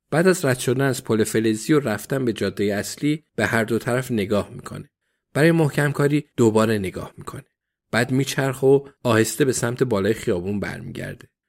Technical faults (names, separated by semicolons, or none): none